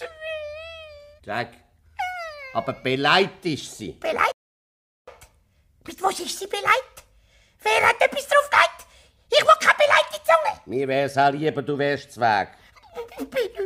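At 4.32 s there's a rebuffering stall: the player ran dry, dropped to silence for about 0.75 s, then picked up exactly where it left off, nothing missing.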